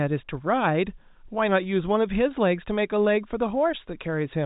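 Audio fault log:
No faults detected.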